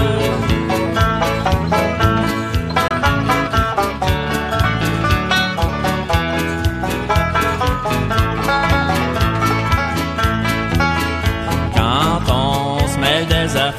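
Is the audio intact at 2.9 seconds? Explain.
No. A digital broadcast dropout runs from 2.88 to 2.91 s: the receiver stopped getting valid frames, likely a single corrupted one, and muted, fading out in about 3 ms. Roughly 24 ms of sound is lost as a brief silent hole.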